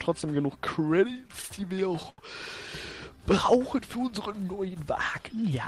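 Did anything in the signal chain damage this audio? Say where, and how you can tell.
Yes, in the network stage: repeated stalls (stutter) from 1.07 to 2.20 s. Packets arrived late, so the jitter buffer kept running dry and the receiver stretched the last sound about fifteen times, longest 80 ms, adding about 0.22 s. Nothing is lost; the audio drags and stutters.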